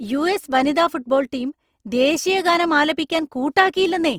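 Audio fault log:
throughout Opus compression: the speech sounds rough and grainy, with tonal parts turned noisy, likely from Opus in its CELT music mode at a rate that fits about 24 kbps. A spectrogram shows full bandwidth with few holes, but upper harmonics smear into noise-filled texture.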